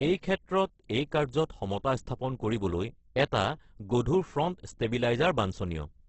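From start to finish the speech sounds rough and grainy rather than swirly, with nothing above about 8.2 kHz, a wideband ceiling. The likely cause is heavy Opus compression in its music mode, which fits a bitrate near 12 kbps. That mode keeps each band's energy and fills starved bands with folded or noise-like content, so consonants and vowels turn gritty instead of developing the watery holes and warble that MP3 at a similarly low rate would leave.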